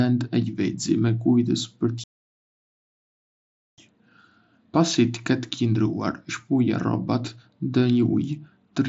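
At 2.04 s the speech cuts to silence for 1.74 s, resuming at 3.78 s; this playback stall likely came from the player starving for data. Throughout, the mSBC headset path limits the band to about 7.7 kHz.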